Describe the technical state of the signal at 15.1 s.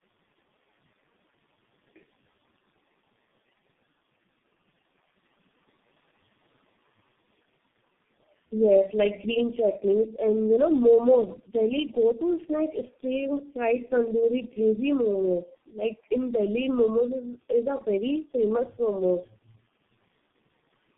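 At 15.1 s the speech carries tandem speech coding, as it does through the whole clip. Three speech coders have run in a row, the last sounding like G.723.1, each re-encoding the previous one's damaged output. Nothing survives above 3.8 kHz, and the sound is rough, muffled and warbling. A single low-rate codec would muffle it without stacking this much swirling distortion. The room noise, about 38 dB below the speech, comes through the same processing.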